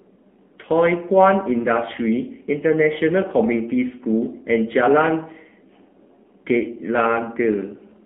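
From start to finish, the speech carries AMR narrowband mobile codec damage, and it is plainly audible. The sound is squeezed into a telephone band of roughly 200 Hz to 3.4 kHz. Nothing above 4 kHz survives, so sibilants lose their edge. The codec rebuilds the voice from a vocal-tract model fed by sparse pulses. At this low rate, the result turns buzzy and synthetic. That texture fits AMR-NB running near 7.4 kbps.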